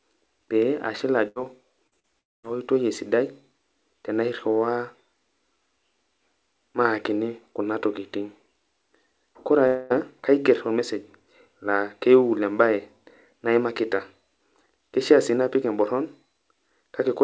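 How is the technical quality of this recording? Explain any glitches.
The recording is speech over a call link, and it has several network glitches. The audio has no content above 8 kHz, which points to a wideband call codec such as G.722 at 64 kbps.

From 1.28 to 1.38 s there is a burst of packet loss. About 80 ms of audio never arrived in time. The receiver covered 76 ms of it by extending the last sound and fading it down. You hear a brief held buzz or hiss. The speech then resumes slightly further on, with that piece gone.

Two cases of short concealed packet loss follow, at 1.87 to 1.95 s and 2.00 to 2.06 s. Each time, 40 ms failed to reach the decoder. The receiver filled the gap by continuing the previous sound, then blended back into the real signal. Each one is a quick smear or wobble. A short consonant can drop out inside it.

Two long network dropouts come next, at 2.19 to 2.46 s and 9.67 to 9.93 s. 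The likely cause is that no packets arrived for about a quarter of a second. In the first, a held sound lasts roughly 236 ms and sinks into near silence. In the second, about 230 ms is filled with a fading continuation and no silence is left. The speech then returns, missing about 240 ms each time.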